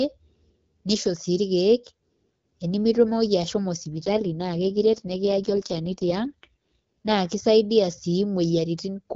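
Speech coded over HD Voice, and from about 3.94 s to 7.18 s it goes through an AMR rate drop. The band stays the same and nothing cuts out, but the voice turns rougher and more synthetic, which fits the codec being pushed from around 12.65 kbit/s down to around 6.6 kbit/s, likely because a weak radio link made the network trade bits for error protection. After 7.18 s it's back to the lightly coded wideband sound.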